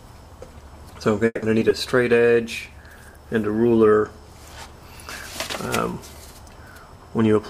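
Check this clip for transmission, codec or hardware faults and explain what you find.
Four kinds of fault are audible: a freeze, two brief concealed losses, a bitrate drop and a speed-up near the end.

Call audio freeze, 1.25 to 1.44 s: the sound stops progressing and the last moment is drawn out as a fading buzz or hiss for about 170 ms, ending in roughly 20 ms of silence, then resumes exactly where it left off. This is likely delayed packets emptying the jitter buffer, which adds 170 ms of delay without losing content.

Short concealed packet loss, 1.60 to 1.63 s and 1.69 to 1.72 s: each event is a quick smear or wobble about 30 ms long. In each, 20 ms of audio never reached the decoder in time, so the receiver extended the preceding sound for about 10 ms and blended it back into the real signal.

Call bitrate drop, 2.13 to 3.99 s: the sound turns rough and muffled, with the top end dulled. 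A falling bandwidth estimate pushed the encoder from 96 to 22 kbps, holding at the lowest rate for 1.78 s. Opus then codes coarsely and trims high frequencies.

Jitter buffer speed-up, 6.96 to 7.44 s: the audio runs at about 118% speed with unchanged pitch, sounding hurried. The buffer had collected more audio than its target, so the receiver repeatedly removed short pitch-period slices, about a tenth of a second in total, to reduce the delay.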